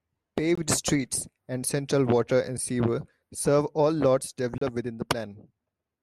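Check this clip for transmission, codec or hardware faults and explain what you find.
The speech has three short silent holes, all gaps between stream segments. They fall at 0.55 to 0.58 s, just before "streets and central water", at 2.58 s between "and central water and" and "sewer serve all lots", and at 4.58 to 4.62 s after "sewer serve all lots". They last about 22, 6 and 33 ms. They recur every 2 seconds, which fits 2-second segments. Adjacent segment time stamps leave a small gap. The player fills it with silence. Each hole has hard edges.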